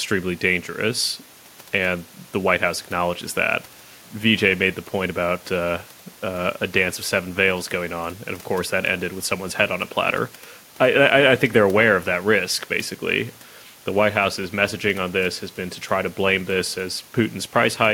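Speech, with no technical fault to be heard anywhere in the recording. Nothing in it calls for a time or a cause.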